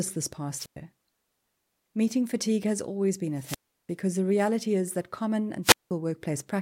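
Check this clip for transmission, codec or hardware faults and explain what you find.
Three wireless microphone squelch dropouts break up the speech, at 0.52 to 0.76 s, 3.34 to 3.92 s and 5.63 to 5.91 s. The FM signal fades, hiss swells, then the receiver's squelch mutes everything for roughly 0.11, 0.35 and 0.19 s before the speech snaps back.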